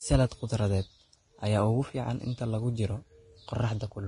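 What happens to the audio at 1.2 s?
At 1.2 s the speech sits under heavy Vorbis compression that runs the whole clip: nothing above 10.5 kHz, and grainy, hissy treble, likely from coarse quantisation at around 30 kbps.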